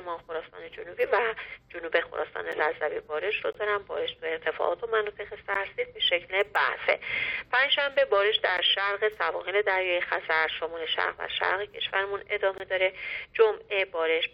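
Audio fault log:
2.52, 3.53–3.55, 5.54, 8.57 and 12.58–12.60 s: gap between stream segments. Timestamps of adjacent 1-second segments fail to meet, so the player fills each boundary with 7 to 21 ms of silence. The sound drops out abruptly with hard-edged holes, though nothing is lost.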